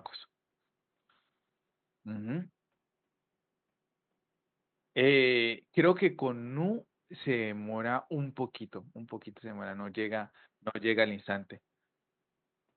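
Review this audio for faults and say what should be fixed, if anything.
Nothing here needs fixing, as no faults can be heard in the speech. The room noise sits about 54 dB below the voice, faint in the background, and it belongs to the recording space rather than the system.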